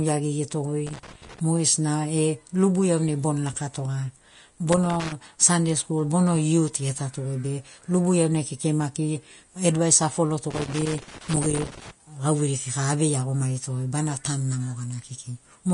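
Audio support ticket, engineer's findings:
Whole clip, plainly audible codec damage: grainy, hissy treble, roughened tones, smeared consonant attacks, nothing above 10.6 kHz. Likely Vorbis compression at a low bitrate, around 34 kbps from the sound. Encoder lowered cut-off and quantised upper residue so coarsely that fine detail turned to noise of similar energy.

Loose connector crackle, irregular scratching bursts:
0.87–1.39 s.
4.72–5.12 s, just before "sunday skul bono youth".
10.50–11.91 s, just before "gauveiri kika avei iagomarito".
Probable component: worn or dirty cable contact making and breaking as it moves, chopping the signal.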